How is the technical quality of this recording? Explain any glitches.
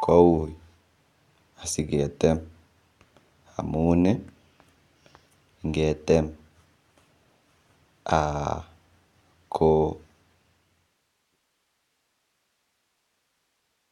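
Nothing stood out as a glitch on listening to this speech recording; the only change in level is a smooth fade-out that begins around 10 s and finishes at 11.39 s, with no click or hard edge.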